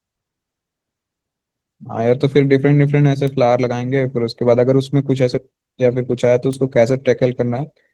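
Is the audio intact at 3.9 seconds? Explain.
No. At 3.9 s the speech carries Opus voice compression, present through the whole clip. The low band is coded by linear prediction with coarse excitation, and a CELT layer covers the band above 8 kHz. The result sounds muffled, hoarse and slightly robotic, fitting roughly 16 kbps.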